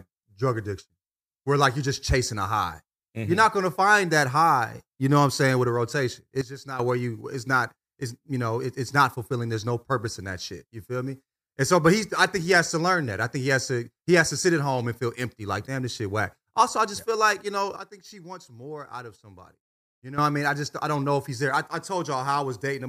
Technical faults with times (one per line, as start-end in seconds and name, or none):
6.41-6.79 sudden gain jump
17.76-20.18 sudden gain jump